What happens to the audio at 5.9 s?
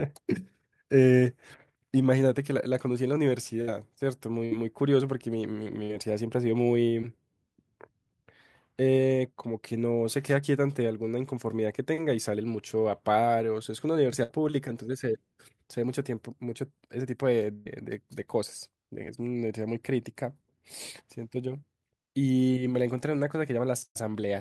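A burst of packet loss hits the speech from 5.83 to 5.92 s: a short run of packets never arrived in time, so the receiver had nothing real to play. It stretched the last sound it had for about 57 ms, fading it down, which comes out as a brief held buzz or dying hiss. Playback then picks up again, but roughly 60 ms of the original speech is simply gone.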